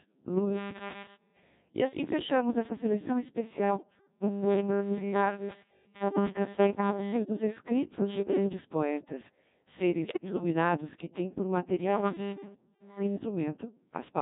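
Throughout, the speech sounds robotic and buzzy, the mark of the Codec 2 vocoder at 1.6 kbit/s, which rebuilds the voice from sine waves using only pitch, voicing and envelope. From 10.04 to 10.43 s it breaks into warbling, pitch-jumping gibberish, as bit errors on digital voice radio, at around 7 percent, scramble several consecutive vocoder frames.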